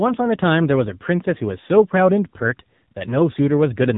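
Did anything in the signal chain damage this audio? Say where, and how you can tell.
Yes. An AMR narrowband mobile codec at the codec stage, throughout: nothing above 3.8 kHz survives, and the speech sounds plainly buzzy and synthetic, which fits an AMR-NB mode near 8 kbps. A spectrogram shows a flat ceiling at 3.8 kHz with blank space above.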